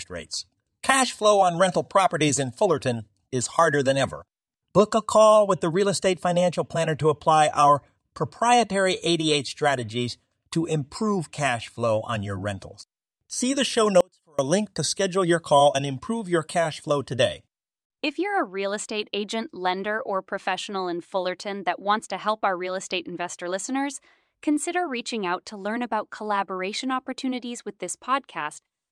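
After "the show", at 14.01 s, the speech cuts abruptly to a faint leak far below normal level for 0.38 s until "a link to schedule", likely an audio dropout to a faint residue.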